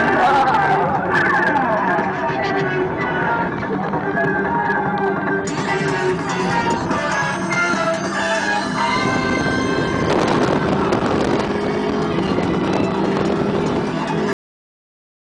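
At 14.33 s there's a cut-off end: the sound stops dead mid-event and drops straight to digital silence for the last 0.9 s or so, with no decay at all. The final buffers were never written or played, so the tail simply isn't there.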